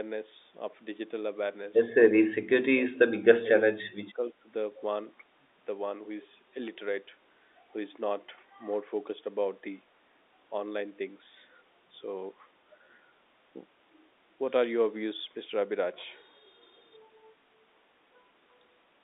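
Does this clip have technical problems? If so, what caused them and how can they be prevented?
Yes. Between 2.91 and 3.51 s, and again between 3.72 and 4.49 s, the speech dips by roughly 25 to 30 dB in short stretches. On the waveform the envelope pinches nearly flat. This is likely speech suppressed in double talk: with both sides talking at once, the echo canceller could not tell this talker from loudspeaker echo and turned both down. A better-tuned double-talk detector, or a headset that removes the acoustic echo path, would prevent it.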